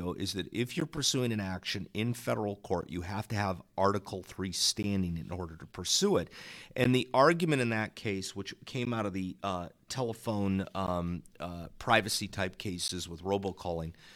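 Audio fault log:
0.80 to 12.88 s (at 0.80, 2.81, 4.83, 6.84, 8.85, 10.87 and 12.88 s), gap between chunks: a hard-edged hole of about 13 ms every 2.0 s, like right after "an action in federal" and after "of the uh telephone", where silence is left at each join between chunks.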